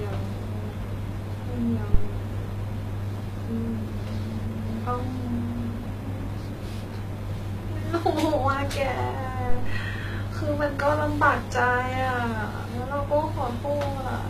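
A speech recording, with the whole clip likely passed through HE-AAC compression at a very low rate, one that fits something around 20 kbps. The encoder codes only the lower spectrum and rebuilds the treble by copying lower bands upward under a rough envelope, so the top end sounds synthetic: sibilants come out gritty and lisping, the codec damage is plainly audible throughout, and nothing survives above about 14.9 kHz. Separately, a supply was switched on or off on the live input, most plausibly phantom power, and the voltage step passed through the coupling capacitors as a phantom power thump from 1.94 to 2.13 s. It is a deep, low-frequency bump that dies away quickly, decaying over roughly 42 ms, rather than a click or crackle.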